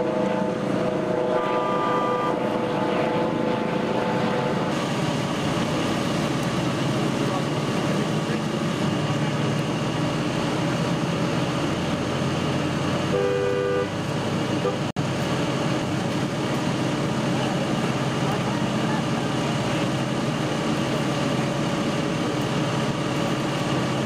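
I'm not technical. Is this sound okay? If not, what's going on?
No. At 14.91 seconds the audio drops out to silence for about 59 milliseconds, then carries on at 14.97 seconds. That short gap is most likely a Bluetooth stall: radio interference delayed the wireless data on its way to the headphones, the small store of sound they keep in reserve ran out, and playback paused until the missing data was sent again and arrived.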